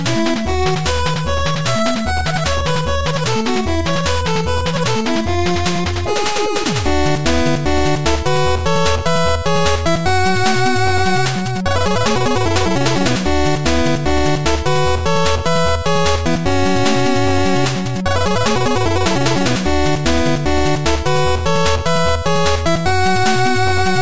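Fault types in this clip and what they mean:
No audible technical faults.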